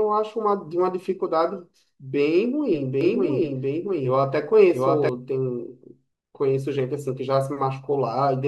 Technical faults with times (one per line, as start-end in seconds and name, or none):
3.01-5.09 doubled audio track